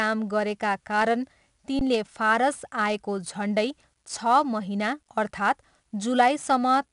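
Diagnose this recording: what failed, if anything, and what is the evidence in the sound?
4-bit ADPCM compression, a codec-stage fault, throughout: gritty hiss tracks every loud speech passage, and nothing sounds above 10.6 kHz, which fits 88 kbps coding.

Underrun with held sample at 1.79 s, a buffer fault: the waveform freezes flat for 19 ms, with roughly 20 ms of live audio lost.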